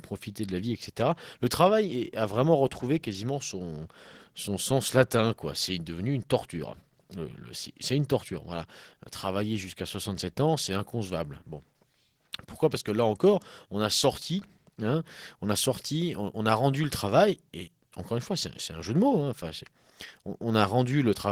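Opus voice compression runs throughout: plainly hoarse, slightly robotic speech, consistent with hybrid coding near 16 kbps; a spectrogram shows blurred harmonics and patchy, blocky energy above 8 kHz.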